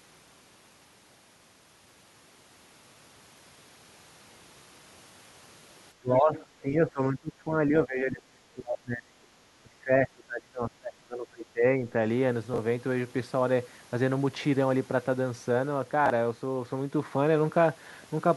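From 6.0 to 7.53 s, 7.69 to 9.28 s and 9.63 to 11.85 s, the speech dips by roughly 20 to 30 dB. This is likely speech suppressed in double talk, with the echo canceller ducking the talker. The waveform sags.

From 6.15 to 6.43 s, the other side's voice leaks through, about 20 dB below the speech. It is likely residual echo the canceller missed, and shows as a faint, separate trace.

At 8.2 to 8.26 s, 12.54 to 12.58 s and 16.06 to 16.1 s, chunks are out of order. These are 20 ms blocks played one or two places late. Each is heard as a garbled, jumbled moment and shows as sharp vertical seams.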